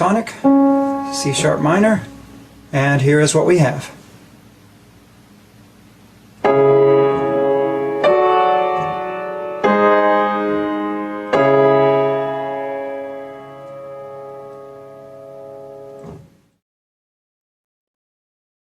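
Gain pumping runs through the whole clip, with the level swinging by around 10 dB. The likely cause is input gain set far too high, with a fast compressor or limiter clamping down on each peak and releasing in the pauses. Loud and quiet passages sit unnaturally close in level, and the audio sounds squashed and breathing.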